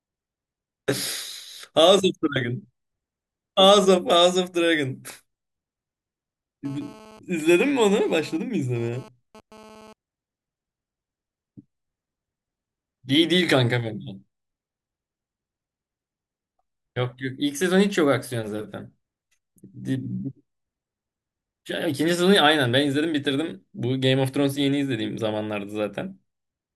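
A nearby 2G handset transmitting a data burst put its radio pulses into the audio circuit, where they were rectified and turned into GSM phone buzz over this speech recording. From 6.65 s to 9.93 s a hard, raspy buzz at about 217 Hz, rich in harmonics, sits about 24 dB below the speech and bears no relation to it. Because the phone was moving data rather than holding a call, the buzz appears only for that stretch.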